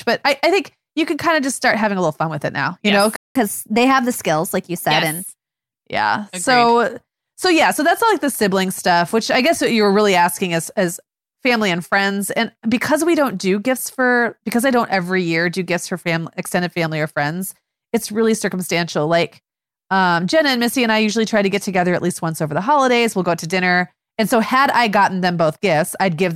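At 3.16 s, just after "now you yes know", there is a playback stall. The speech cuts off in mid-flow and the output goes silent for about 191 ms, until 3.35 s. The gap sounds like a sudden dropout inside the phrase, not a natural pause. The likely cause is that the player ran out of buffered data, or its playback thread was blocked, so it had nothing to send to the output until it recovered.

From 3.35 s to 5.27 s the player plays its backlog in a catch-up at higher speed. It resamples the buffered audio to run at 1.1 times normal speed, which wins back the time lost in the stall. Because this is plain resampling, not time-stretching, pitch rises along with tempo, by roughly one and a half semitones. For those two seconds the voice sounds hurried and slightly higher, and the effect ends at 5.27 s.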